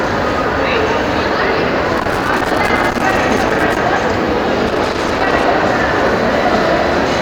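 At 1.97 s a loose connector crackle begins and runs to 3.77 s, then returns from 4.67 to 5.45 s. A worn or dirty contact is making and breaking as it shifts, chopping the sound into ragged fragments and adding pops where the line jumps. It is heard as irregular scratchy crackling. On a waveform the signal drops out in jagged gaps with sharp spikes; a spectrogram shows scattered broadband vertical streaks across both spans.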